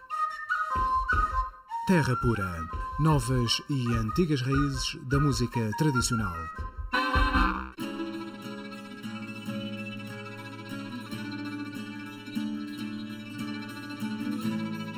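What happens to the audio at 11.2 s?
At 11.2 s the audio has channel delay (comb filtering), as it does for the whole clip. One channel lags the other by under a millisecond, and summing them cancels evenly spaced frequencies from around 700 Hz upward. The result sounds hollow and phasey, and a spectrogram shows fixed, horizontal dark notch bands.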